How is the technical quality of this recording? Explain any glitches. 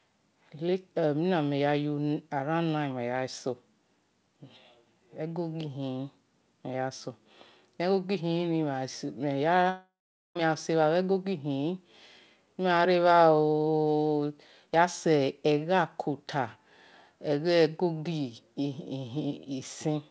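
The recording has one clear glitch in the middle. The audio carries nothing above 8 kHz, which fits a wideband call codec such as G.722.

From 9.70 to 10.37 s there is a long network dropout, likely from lost packets. The last sound smears into a fading buzz, then about 0.43 s of silence follows. Roughly two thirds of a second of speech never returns.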